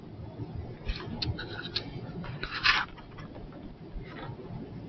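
A noise suppressor applied to music or sounds runs throughout the clip. The suppressor treats sustained tones, ambience and decaying tails as noise. Onsets pass, but held sound sinks by around 10 dB and then recovers, so the audio pumps and thins. The band stays capped near 8 kHz by the call's microphone path.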